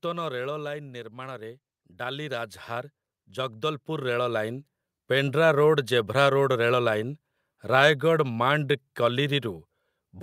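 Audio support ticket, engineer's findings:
Automatic gain falling, 0.05–1.17 s: AGC in the capture chain judged the input too loud and ramped its gain down by about 6 dB. Speech and background noise sink together across that first second, not the talker backing off.

Automatic gain rising, 1.1–5.61 s: same AGC reads input as too quiet and climbs about 14 dB over roughly four and a half seconds. Speech and background swell in step, levelling off just before "ରୋଡ୍ ଜେଭ୍ରା ରୋଡ୍".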